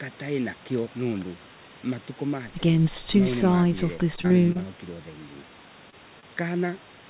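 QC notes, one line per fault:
4.16–4.60 s, repeated packet loss (robotic sound): five gaps in under half a second, the longest 29 ms, with about 60 ms of speech lost and patched by continuing the last sound. Roughly a fifth of the span is concealed, giving a choppy run rather than one isolated blip.
5.90–5.94 s, short concealed packet loss: about 20 ms of speech never arrived, and the receiver covered it by extending the preceding sound before blending back in. The result is a single brief smear, and unlike a stall, real audio is actually gone here.
6.20–6.25 s, short stall from a late packet: one packet arrived 26 ms late, the jitter buffer ran dry, and the last sound was held until it came. Nothing is lost, so this is a slightly drawn-out sound with a slight buzz or dip rather than a smear or gap.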